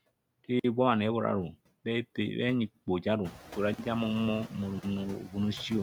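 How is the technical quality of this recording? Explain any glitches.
The recording has two audible faults: regular dropouts and noise suppression. The room's background noise is part of the recording and rises by about 13 dB around three and a half seconds in, staying about 12 dB below the speech.

Gap between chunks: Holes of about 48 ms appear at 0.59, 1.64, 2.69, 3.74 and 4.79 s. The audio was delivered in 1.0 s chunks, and silence was left at each join.

Noise suppressor artifacts: Throughout the clip, the background noise sinks between phrases and returns under the speech. A suppressor is cutting the bands it reads as steady noise, by about 19 dB, frame by frame.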